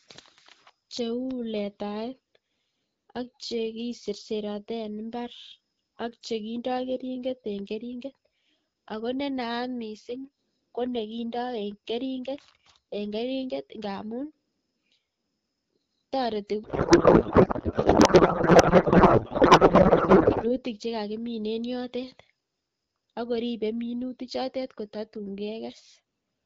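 Codec payload misread from 16.63 to 20.51 s interrupts this speech recording, where an AMR wideband stream that otherwise sounds clean, as expected near 12.65 kbit/s, turns into garbled noise and warble until "chekakimin en yotet". The pattern points to octet-aligned AMR frames being unpacked as bandwidth-efficient, so every field lands in the wrong place.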